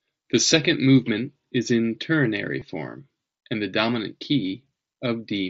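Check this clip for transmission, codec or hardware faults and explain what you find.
One transmission fault, in the speech at 2.60 s: a momentary buzzy hold lasting 15 ms. This is concealed Bluetooth headset packet loss. The short gap, consistent with a couple of dropped packets, was filled by repeating the best-matching stretch of the waveform just before it. The mSBC headset codec carries the audio throughout, with light grainy noise on louder sounds.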